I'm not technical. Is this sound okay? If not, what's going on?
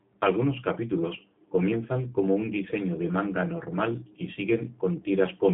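No, not quite. The whole clip has been squeezed through the G.729 codec, a phone-call format that rebuilds speech from a rough model of the voice. Everything above about 3.7 kHz is gone, so it sounds thin, like a phone line, with a slightly rough, synthetic edge.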